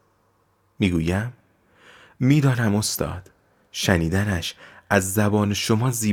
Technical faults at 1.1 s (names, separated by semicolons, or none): none